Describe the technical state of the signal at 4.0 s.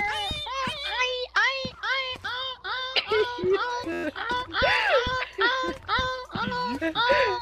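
At 4.0 s the signal is caught in a system hang loop, running from 3.92 to 4.04 s. The playback hardware kept replaying one 11.61 ms segment, which fits a 512-sample buffer, ten times over, producing a steady buzz at 86.1 Hz.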